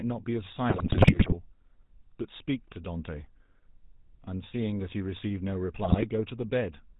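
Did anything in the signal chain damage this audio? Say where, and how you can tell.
Yes. The codec stage is the main culprit. The whole clip carries the GSM full-rate codec sound: a buzzy, gravelly roughness on the speech and nothing above 4 kHz. The coder rebuilds the voice from a vocal-tract filter driven by regularly spaced pulses. Only every third excitation sample survives, so the fine detail turns to grit. The damage is plainly audible and fits a 13 kbps full-rate stream.

The network link adds GSM bit errors in two bursts, from 0.70 to 1.34 s and from 5.84 to 6.06 s. There the speech breaks into squawks, pops and gargling. Corrupted bits reached the decoder and scrambled the filter, pitch and gain values. Each damaged frame then came out with a bent spectrum or a sudden jump in level. The first burst is longer and rougher, pointing to about thirty damaged frames against about ten in the second.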